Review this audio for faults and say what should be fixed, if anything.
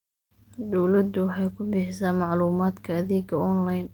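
No faults can be heard; nothing needs fixing.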